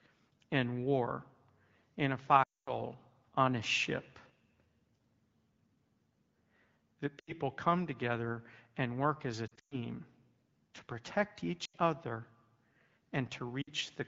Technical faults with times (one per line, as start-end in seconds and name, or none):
2.43-2.80 lost AMR speech frames
7.20-7.33 lost AMR speech frames
9.48-9.85 lost AMR speech frames
11.65-11.75 lost AMR speech frames
13.62-13.70 lost AMR speech frames